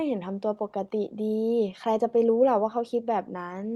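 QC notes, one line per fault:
Faults: none to note in this speech clip.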